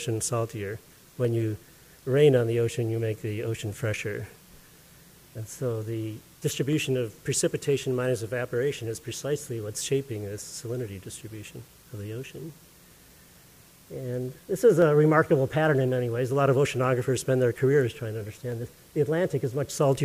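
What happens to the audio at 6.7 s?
At 6.73 s there is a single sharp click. It is likely dropped samples: a fraction of a millisecond goes missing, so the waveform jumps abruptly.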